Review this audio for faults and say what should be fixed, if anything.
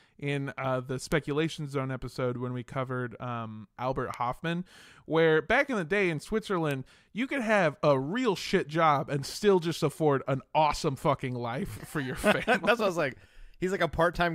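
Three sharp, isolated ticks cut through the speech at 1.12 s, just after "in uh the", at 4.14 s, and at 6.71 s, between "in the day in" and "you could have a", peaking at about −14, −20 and −14 dBFS. These are bit error spikes: a single flipped bit throws one to three samples off by a power of two before they snap back, producing a broadband click unrelated to the speech. Use error-checked memory and links, with checksums or parity on the digital path, so corrupted samples are caught before playback.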